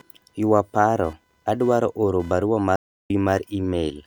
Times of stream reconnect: 2.76-3.10

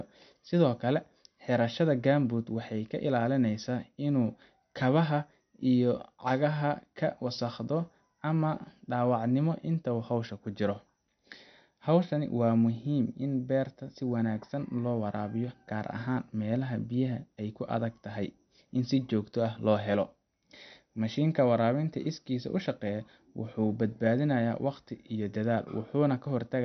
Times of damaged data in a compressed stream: none

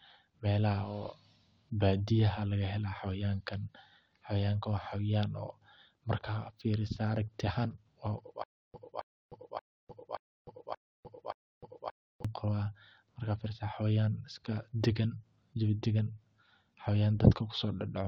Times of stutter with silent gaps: 8.44-12.25

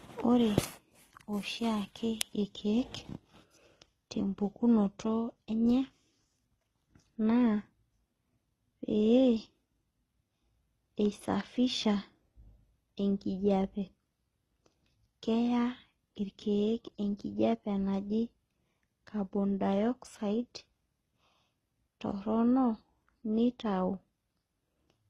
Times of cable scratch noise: none

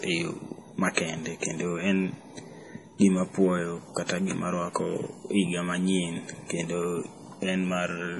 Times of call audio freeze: none

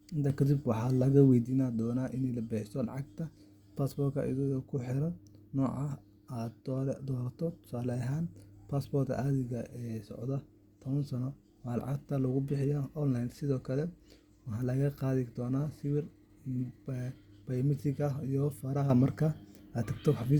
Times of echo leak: none

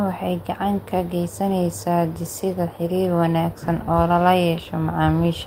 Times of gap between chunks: none

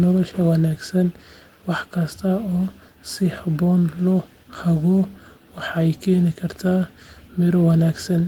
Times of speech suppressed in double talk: none

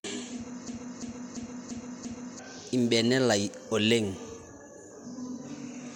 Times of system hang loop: 0.68-2.39

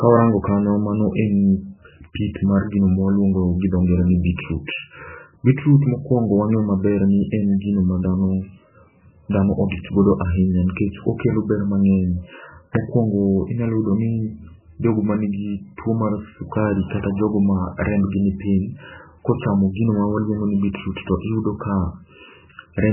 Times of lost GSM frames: none

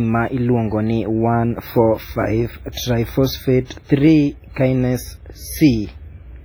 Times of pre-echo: 2.72-2.77

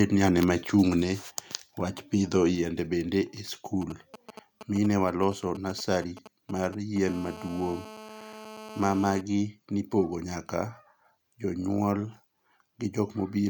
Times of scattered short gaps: none

